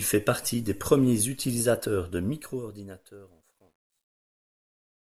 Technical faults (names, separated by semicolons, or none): truncation distortion on a fade